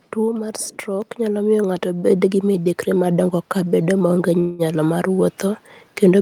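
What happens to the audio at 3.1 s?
At 3.06 s, just after "gi midekre", the microphone volume is stepped up: the input gain jumps by about 2 dB in a single step, lifting the speech and background together. The waveform envelope widens abruptly there, and the spectrogram brightens uniformly across all frequencies.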